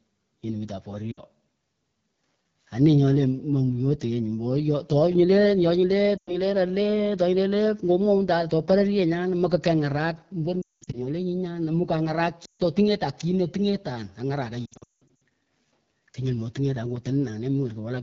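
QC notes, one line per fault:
throughout: AMR wideband (HD Voice) codec. The speech sounds rough and raspy, consistent with a low AMR-WB mode such as 8.85 kbit/s. The coder models the voice only up to 6.4 kHz and fills 6.4 to 7 kHz with shaped noise. On a spectrogram, harmonics look smeared, 6.4 to 7 kHz is flat noise, and nothing appears above 7 kHz.
1.11–1.20 s, 6.17–6.39 s, 10.62–11.02 s, 12.46–12.62 s, 14.66–15.20 s: lost AMR speech frames. The decoder repeats the last pitch and vocal tract settings at falling gain, so the sound warbles and quickly fades to near silence, then returns weak. The 10.62 s and 14.66 s stretches drop out repeatedly. On a spectrogram, the harmonics freeze and fade, and the waveform envelope tapers toward silence.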